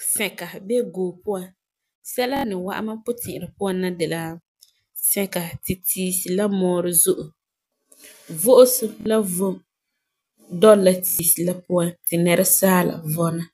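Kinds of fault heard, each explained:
Automatic gain rising: the level control lifts speech and background together by about 3 to 5 dB over about 1.8 to 3.1 seconds, a slow widening waveform envelope.
Bluetooth stutter: short slices repeat at 2.37, 9.01 and 11.08 s, filling gaps of 70, 46 and 116 ms; spectrograms show regularly repeating vertical stripes.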